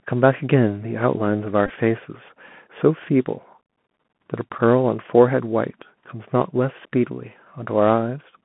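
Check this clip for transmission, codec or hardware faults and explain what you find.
Two faults are audible: a Bluetooth CVSD headset codec throughout, and Bluetooth headset packet repeats at two moments.

The whole speech clip carries the Bluetooth CVSD headset codec. It is a one-bit delta coder with an adaptive step, which fits a 64 kbps stream. Sound is held to about 150 Hz to 3.4 kHz. Sibilants turn scratchy, loud peaks distort, and a granular hiss sits underneath.

Bluetooth headset packet repeats occur from 1.66 to 1.71 s and at 6.83 s. Lost voice packets were replaced by decoding the previous packet's bits again. The first event loses 30 ms scattered over 37.5 ms. It points to about eight packets, with the longest run about 20 ms, and gives a brief buzz near 267 Hz. The second is one packet, a small tick.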